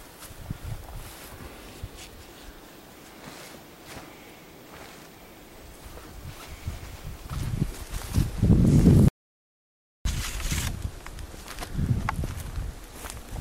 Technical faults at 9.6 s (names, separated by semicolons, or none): audio dropout to silence